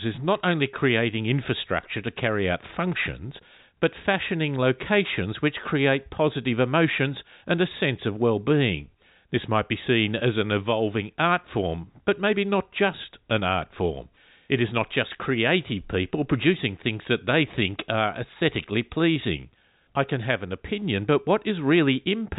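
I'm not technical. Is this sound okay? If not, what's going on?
Yes, this sound is okay: it comes through as ordinary telephone-line speech, with nothing going wrong.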